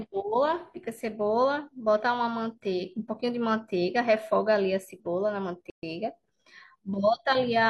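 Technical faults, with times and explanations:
5.70 to 5.83 s, gap at a join of encoded pieces: the speech drops out for about 130 ms and picks up right where it left off. Two separately encoded chunks were butted together untrimmed, so one's end padding and the next one's start-up silence both stayed in, with smeared edges.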